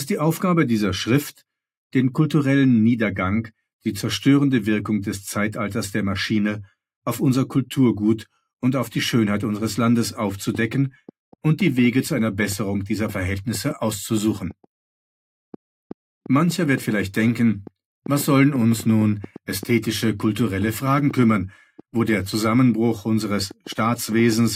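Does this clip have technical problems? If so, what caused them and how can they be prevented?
Yes. From 10.55 s to 24.34 s a train of clicks ticks unevenly over the sound, about 4.3 per second, some seventy in all, peaking about 5 dB above it. Interference or a faulty connection or power supply is likely injecting repeated pulses. Keep cables away from nearby equipment and check the interface's connections.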